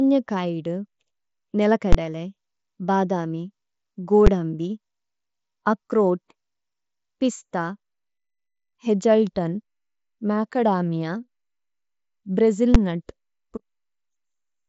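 Speech carried over a Bluetooth mSBC headset link, its spectrogram empty above about 7.7 kHz, is hit three times by invalid numbers at full scale: from 1.93 to 1.95 s, at 4.27 s, and at 12.75 s. Each time a calculation produced infinite or invalid values that were forced to maximum amplitude for a 10 to 20 ms block, so each is heard as one loud bang. On a waveform each shows as a solid flat-topped slab pinned at one extreme value far beyond the speech peaks, and on a spectrogram as a bright vertical stripe spanning every frequency.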